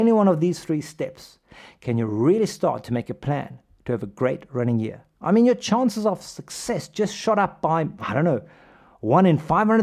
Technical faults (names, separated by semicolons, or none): none